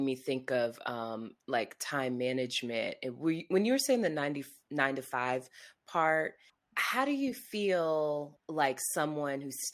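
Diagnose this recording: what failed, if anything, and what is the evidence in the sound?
Nothing failed anywhere in the chain; the speech signal stays continuous and steady throughout, with no audible event at any stage that would point to a fault.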